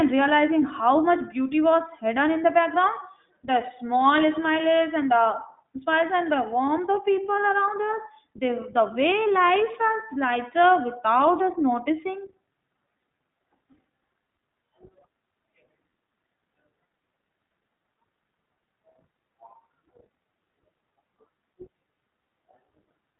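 From start to finish the speech carries iLBC codec damage. Nothing reaches above about 3.8 kHz, and each frame's excitation is coded independently, which fits 20 ms frames at 15.2 kbps. Unlike a plain low-pass filter, this adds plainly audible damage, leaving the voice a little rough and synthetic.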